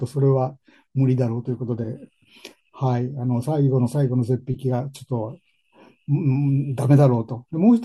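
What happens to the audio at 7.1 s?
Nothing goes wrong at 7.1 s; the speech there plays through intact, with no dropout, click, distortion or other fault.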